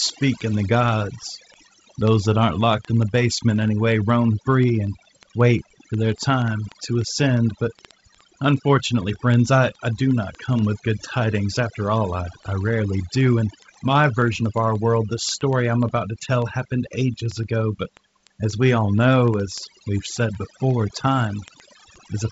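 Throughout the speech, overdone noise removal drops the background, breaking it into twinkling specks, and takes quiet parts of the voice with it. Unlike the fixed top cut-off of the wideband coding, this loss flickers from band to band.

From 0.11 s to the end, word clock ticks recur roughly every 70 ms, sharp and uneven in strength. They come from an unlocked digital receiver drifting a few hundred parts per million against the sender. Their steady rate sets them apart from random clicks.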